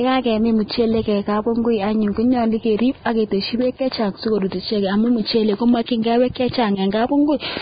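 From start to finish, the speech has that hissy, grainy texture you get with heavy Vorbis compression, likely from a very low-bitrate encode; the damage fits something around 15 kbps. Nothing comes through above 4.9 kHz, so the top end sounds dull. Below that, the treble that's left has been quantised so coarsely that fine detail turns into noise-like fizz. Tones come out roughened and consonant onsets sound smeared rather than crisp.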